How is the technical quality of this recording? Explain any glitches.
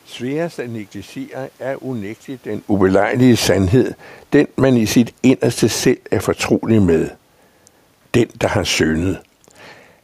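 The recording has one technical fault, a gain drop. An audible shift at about 2.5 s comes from the talker's position changing at the microphone rather than from the system. Room noise sits underneath throughout.

Automatic gain falling runs from 2.66 s to 5.88 s, starting just after "negligere er unægteligt den" and ending before "er fortrolig med". The automatic gain control judged the input too loud or its background noise too strong and eased its gain down by about 7 dB. Speech and room noise sink together, and the waveform envelope and spectrogram background darken evenly across that span.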